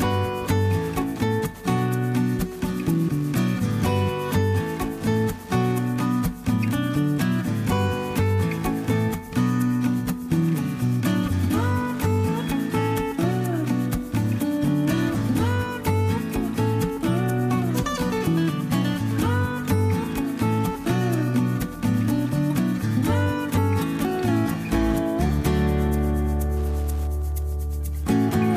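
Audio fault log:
throughout, Wi-Fi interference: a nearby Wi-Fi radio's transmissions are being picked up and rectified by the audio circuit, so its beacon, sent every 102.4 ms, becomes a steady ticking about ten times a second, sitting roughly 30 dB below the sound.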